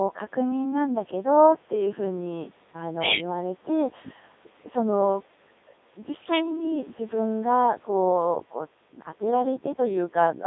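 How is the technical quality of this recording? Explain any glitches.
The recording is heavily degraded by a low-rate vocoder for its full length. From start to finish, Codec 2 vocoder coding is audible. Instead of the waveform, only pitch, voicing, energy and a rough spectral envelope are carried, and the decoder rebuilds the speech from sine waves. The speech comes out robotic and buzzy within a band of about 200 Hz to 3.7 kHz, and the coding runs at 3.2 kbit/s. The call microphone processing's bass roll-off lies beneath this.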